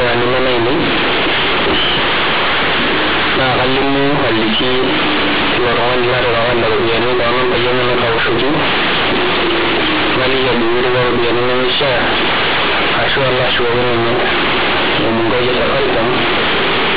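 A speech clip with companded audio read as linear throughout. The A-law bytes are played as plain 8-bit samples without expansion. Every sign change swings the output across about half its range. Quiet passages become as loud as peaks, giving harsh, buzzy distortion and heavy noise in pauses. Beneath this, the telephone band stops at 4 kHz, which fits G.711 coding at 8,000 samples a second.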